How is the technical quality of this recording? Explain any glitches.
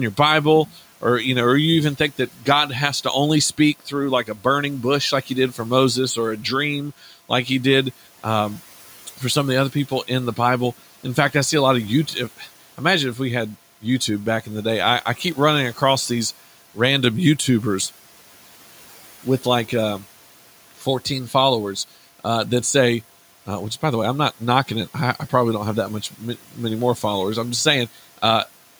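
The recording has speech cut by the noise suppressor, in six stretches: 0.14 to 1.02 s, 1.98 to 7.3 s, 9.18 to 12.8 s, 14.45 to 15.37 s, 20.79 to 21.34 s and 24.4 to 26.57 s. The suppressor mistakes brief parts of the speech for noise and turns them down with the background, by about 9 to 12 dB. Only short moments are hit, around half a second at most in one stretch. Word endings and soft sounds come out swallowed and faint. The room noise sits about 23 dB below the speech.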